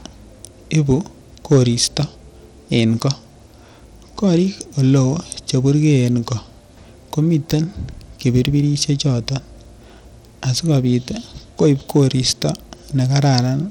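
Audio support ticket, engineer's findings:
Bluetooth SBC compression, likely cause, full length. Coarse sub-band quantisation at a low bit allocation, consistent with roughly 96 kbps. Speech carries plainly audible grit and unstable, flickering treble. Band limit at 19.9 kHz, nothing above.

Hard clipping, three events: 0.75–0.92 s (about 1 dB over), 1.52–1.97 s (about 5 dB over), 11.62–12.42 s (about 2 dB over). A gain stage is driving peaks past full scale and flattening them. The flat tops add high harmonics, heard as harsh crackle on the loud syllables. The 1.52 s event is the worst.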